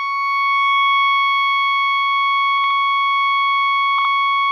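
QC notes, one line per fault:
2.58–2.71 s and 3.98–4.05 s: frames out of order. Neighbouring 64 ms, then 32 ms, blocks play swapped, so the music flutters. No time is lost.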